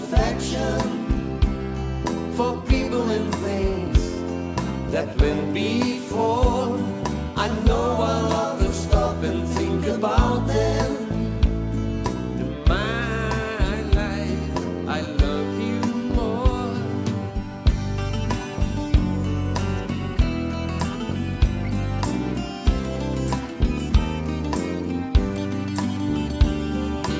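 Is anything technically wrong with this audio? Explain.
No, nothing technically wrong can be heard in this audio. There is no fault to point to anywhere in it.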